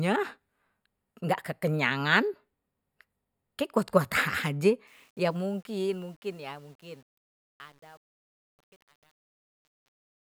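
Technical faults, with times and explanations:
4.87–10.36 s, truncation distortion on a fade: the fade-out turns gritty, worst from 5.73 s to the end. The fade stage keeps too few bits and adds no dither, consistent with about 9-bit resolution, so quiet passages become coarse square steps.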